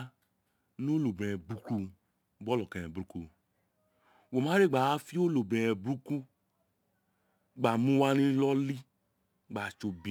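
Crude rate conversion runs through the recording. The sound points to 44.1 kHz audio raised to 48 kHz by repeating the nearest sample, unfiltered. The repeat pattern adds inharmonic tones, roughly 30 dB below the speech. A gritty fizz follows louder, brighter passages.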